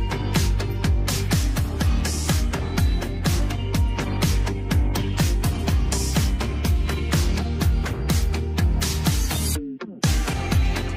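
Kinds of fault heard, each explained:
No faults turn up here; nothing in the clip sounds like a playback or transmission problem at any point.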